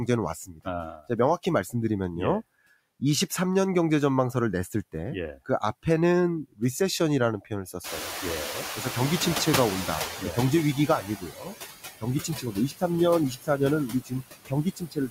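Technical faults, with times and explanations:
Throughout, noise suppressor artifacts: the background is pulled down by about 17 dB, but the suppressor works band by band on short frames, so the noise dips in the gaps and swells back up under the talking.
0.07–1.74 s, 4.73–5.85 s and 6.5 s to the end, speech cut by the noise suppressor: here the suppressor mistakes parts of the speech for noise and turns them down with the background. Drops reach about 17 dB in the first stretch, about 14 dB in the second and about 20 dB in the last. Only brief pieces are hit, roughly 0.3 s, 0.1 s and 2 s in total, which come out swallowed or faint.
7.84–11.11 s, noise suppressor catching up: the room noise jumps by about 25 dB around 8 s and settles about 10 dB under the speech. The suppressor's noise estimate trails behind that jump, so at first the louder background comes through with less reduction. 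Over about 3.3 s the estimate adapts and the noise sinks again, ending up cut by about 11 dB, which you hear as a slow fade of the noise rather than a clean step.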